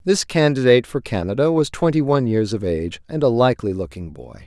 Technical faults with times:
none

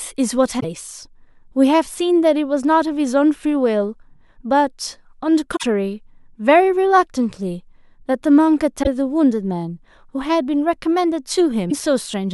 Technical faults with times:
0.56-0.64 damaged data in a compressed stream
5.55-5.63 damaged data in a compressed stream
8.79-8.88 damaged data in a compressed stream
11.67-11.72 damaged data in a compressed stream

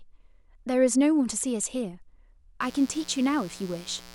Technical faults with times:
2.61-4.14 mains buzz

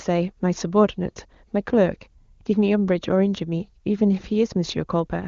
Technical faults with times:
none

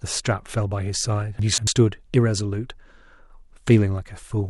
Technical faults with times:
1.39-1.67 chunks out of order

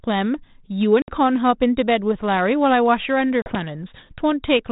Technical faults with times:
1.02-1.08 packet loss on an ADPCM call
3.42-3.55 packet loss on an ADPCM call

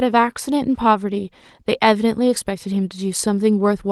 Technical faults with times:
none

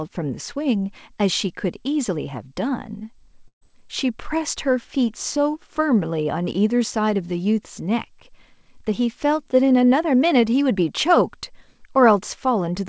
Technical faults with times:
3.48-3.63 burst of packet loss

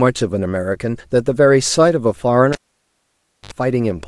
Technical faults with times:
2.52-3.53 cable pulled and plugged in

